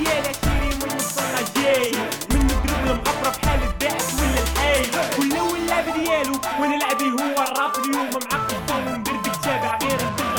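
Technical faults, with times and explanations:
Nothing here stands out as a technical problem; the audio just rolls along without any glitches worth pointing to.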